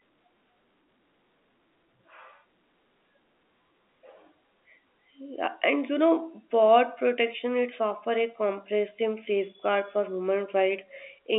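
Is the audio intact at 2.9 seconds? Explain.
Yes, the speech at 2.9 seconds is intact, carried in the narrow telephone band of G.711 coding with nothing breaking or disturbing it at that moment.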